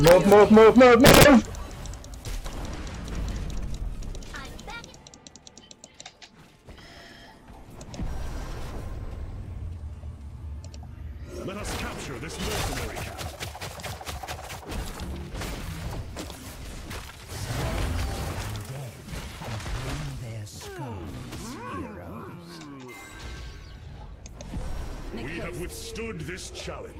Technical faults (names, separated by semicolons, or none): integer overflow